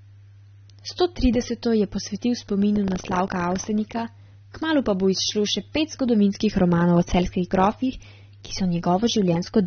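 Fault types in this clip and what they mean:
AAC compression: Throughout the clip, plainly audible codec damage is present, and nothing reaches above about 6.3 kHz, so the speech sounds dull and lacks its upper band. The likely cause is low-bitrate AAC-LC coding, which fits a rate near 24 kbps. That coder quantises its frequency lines against a hearing model and, when starved of bits, drops the upper spectrum and coarsens what remains.
buffer tearing: From 2.72 to 3.65 s, a robotic buzz at 25 Hz runs through the speech, one disturbance every 40 ms. The writing and reading sides of the playback ring buffer have drifted so that they cross within each period. A small slice of every buffer, a few percent, is audio from roughly 150 ms earlier, bounded by hard joins, and that repeating splice produces the rattle.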